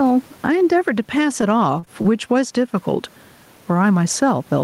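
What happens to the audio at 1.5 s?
Right around 1.5 s you're inside a burst of repeated packet loss running from about 1.41 to 2.06 s. Short holes keep opening, the longest around 35 ms, and each gets patched by stretching the last bit of sound, so the speech turns choppy and a bit robotic.

On top of that, the level keeps pumping by roughly 10 dB, which is likely a gain set far too hot with a fast limiter clamping it back down.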